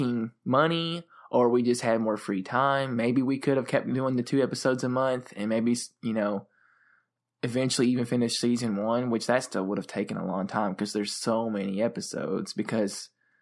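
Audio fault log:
Nothing to log here: the speech comes through without a single problem worth noting.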